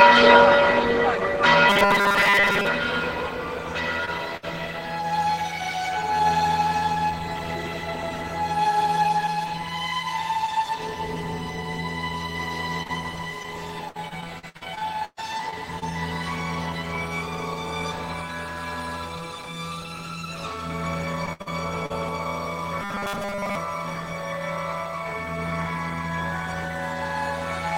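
The audio is marred by several network faults. From 1.70 to 2.67 s, and again from 22.82 to 23.55 s, it takes on robotic sound from repeated short buffers. A rigid, metallic buzz near 200 Hz rides over it. The likely cause is audio arriving too seldom, so a 5 ms slice is replayed over and over, for most of each stretch. At 4.05 s there is a short concealed packet loss. About 20 ms never arrived, and the gap was patched by continuing the previous sound. It is heard as a brief smear or wobble. At 4.37 s a burst of packet loss follows, lasting 60 ms. The last sound is held and fades while it is patched. The audio then resumes further on, with that piece gone. From 12.83 to 15.84 s there is repeated packet loss with robotic sound. Fifteen gaps cost 520 ms, the longest 128 ms, so the sound turns choppy. A shorter stretch from 21.26 to 21.92 s has four gaps totalling 160 ms, the longest 69 ms.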